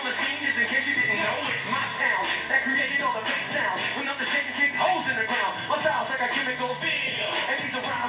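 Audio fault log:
No faults heard.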